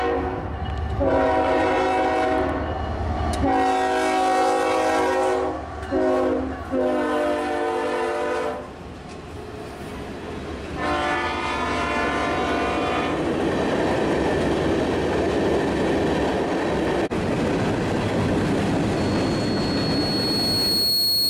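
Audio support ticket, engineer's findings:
Loudspeaker feedback squeal, 18.97 s to end of clip. Mic picking up its own speaker; 4.3 kHz tone swells over roughly 2 s to programme level.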